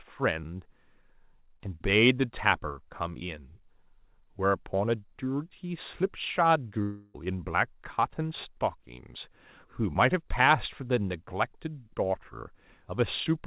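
At 6.82 s the speech breaks off, and the sound does not return until 7.16 s. For those 0.34 s the last sound is stretched into a buzzy, fading fill. No stretch of true silence appears. This points to a long network dropout, likely packets that never arrived. The receiver concealed the gap for almost its full length. When the audio resumes, about 0.32 s of speech is gone. The narrow, telephone-like sound, with nothing above 4 kHz, fits a G.711 call path.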